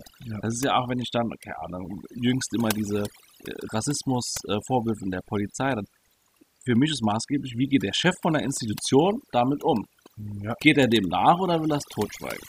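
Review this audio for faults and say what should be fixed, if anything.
Overdone noise removal runs throughout the speech. The reduction was pushed so hard that individual frequency bands are pulled far down or shut off whenever they sit close to the tool's noise estimate, and the softer parts of the voice get taken along with the noise. Between phrases the background drops to near silence scattered with twinkling, chirpy specks. Unlike a noise gate, which mutes everything at once and leaves a clean, dead silence, this leaves those tonal specks behind. To prevent it, use a gentler reduction amount against an accurate noise profile, or reduce the noise at the source before recording.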